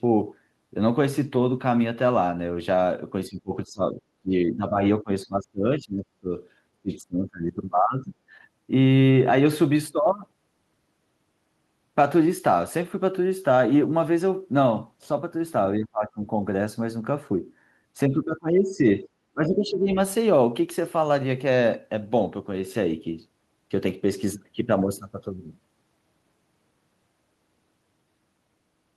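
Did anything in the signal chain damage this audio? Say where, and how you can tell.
Yes. Call processing, most likely the echo canceller, shows speech suppressed in double talk: the speech sinks by up to about 25 dB at 3.28–6.3 s, 6.75–8.13 s and 15.78–16.19 s, and by about 15 dB at 18.09–19.97 s.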